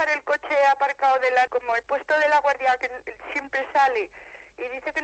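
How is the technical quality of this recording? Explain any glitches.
Two playback faults in the call chain disturb the timing, both on top of the band-limited, coded sound of a low-rate Opus connection with audio cut off around 8 kHz.

Skip ahead, at 1.47 s: roughly 0.4 s of waiting audio was dropped, so playback jumps abruptly forward, with the two sides butted together and nothing filling the gap.

Jitter buffer speed-up, 1.56 to 2.86 s: still holding excess audio, the receiver kept trimming pitch-period slices, removing about a tenth of a second. The sound runs 7% fast at unchanged pitch and feels hurried.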